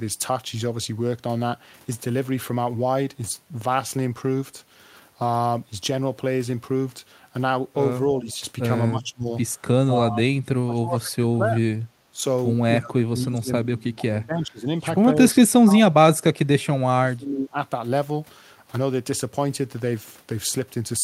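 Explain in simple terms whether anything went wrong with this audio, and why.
A couple of things went wrong. There's speech suppressed in double talk at 8.18–8.27, 8.9–9.32, 9.91–11.62, 12.11–12.21 and 12.79–17.56. The speech dips, and in the longer stretches it nearly vanishes, likely because the echo canceller mistook both sides talking at once for echo. There's also a brief echo leak at 8.29–8.33, a faint copy of the speech returning about 275 ms late, likely loudspeaker sound the canceller missed.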